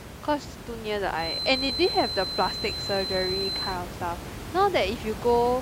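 A feedback whistle runs from 1.12 to 3.80 s: a thin, steady 4.1 kHz tone a few decibels under the speech, swelling and fading slowly, likely from a loudspeaker-to-microphone loop held just short of runaway.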